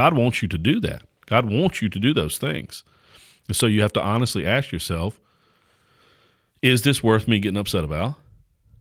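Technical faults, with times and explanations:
Throughout, sample clock jitter: timing wobble of under a microsecond shifts each sample slightly, adding a faint hiss about 45 dB below the speech that swells on loud, bright sounds and vanishes in pauses. A spectrogram shows a raised high-frequency noise floor tracking the speech.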